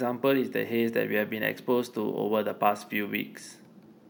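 Throughout the speech there is imaging from sample-and-hold upsampling. The audio was raised from 16 kHz to 48 kHz by holding each sample rather than interpolating, so nothing removed the mirrored copies of the spectrum. The first copy fills 8 to 16 kHz at about 21 dB below the signal, heard as a bright metallic fizz. Unlike steady hiss, it rises and falls with the speech. Its lowest band moves opposite to the pitch.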